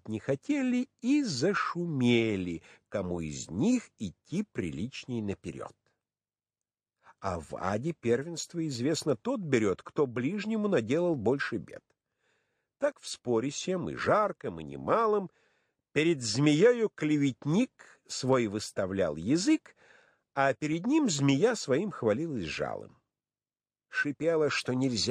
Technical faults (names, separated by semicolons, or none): clock drift buffer slips